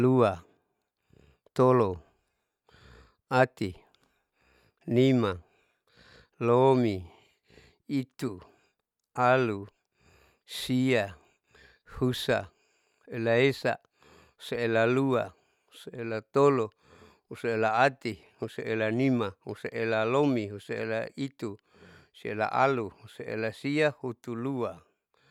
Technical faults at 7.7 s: none

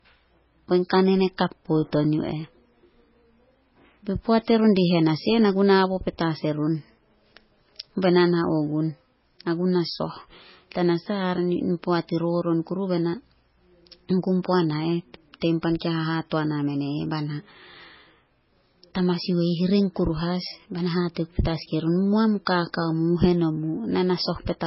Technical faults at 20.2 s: low-bitrate audio saved at a high bitrate

